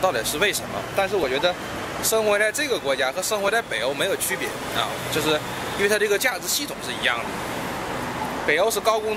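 From 1.24 s to 7.97 s there's a regular click about every 2.25 s, four or so in all: clock drift buffer slips, likely from two clocks several hundred ppm apart.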